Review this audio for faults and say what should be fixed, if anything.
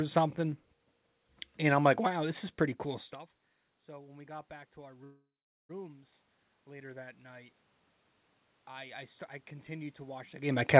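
Automatic gain rising shows up twice. Right after "this is pretty cool," around 3.0 s, the talker moves away and the level at the mic drops by about 24 dB. From 3.1 s to 7.54 s the AGC slowly pushes its gain up by about 6 dB, so the voice and the room noise swell together over several seconds. It starts again at 9.66 s and keeps climbing to the end of the clip, with the talker shifting again near 10.5 s. To prevent it, keep the talker at a steady distance from the mic, or give the AGC a slower attack and a lower gain ceiling so it doesn't chase every lean-back.

There's a call audio freeze from 5.04 s to 5.71 s. The last bit of sound gets stretched into a fading buzz or hiss for about 0.65 s, and roughly 0.41 s of that is just silence before the audio picks up exactly where it stopped. Nothing is lost, but the whole rest of the call now runs about 0.65 s later. The likely cause is packets stalling in transit until the jitter buffer ran dry and had to fill the wait. 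You can both hear it's G.711 mu-law too, with nothing above 4 kHz. To prevent the freeze, sort out the network path or give the jitter buffer a bit more headroom so it rides out delays like this one.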